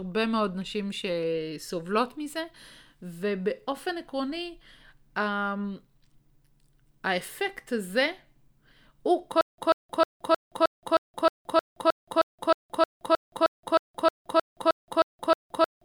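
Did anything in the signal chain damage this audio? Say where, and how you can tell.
Yes. The playback or streaming stage likely stalled at 9.41 s and never recovered. At each retry it replayed its last buffered fragment and then ran dry. The result is a stutter with silent gaps: a 140 ms burst of the same speech returns every 312 ms, separated by about 171 ms of digital silence. It repeats around 20 times and lasts until the end of the clip, so the speech after 9.41 s is lost.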